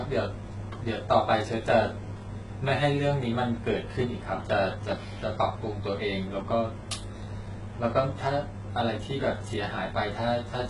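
Throughout the speech, the audio was likely passed through HE-AAC compression at a very low rate, consistent with about 12 kbps. Only the lower spectrum is coded, and the treble is rebuilt from copied bands and cut off near 11.1 kHz, leaving heavy damage: gritty, metallic s sounds.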